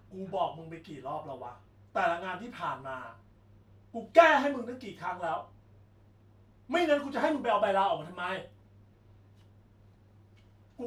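A speech recording with nothing technically wrong to report anywhere in it.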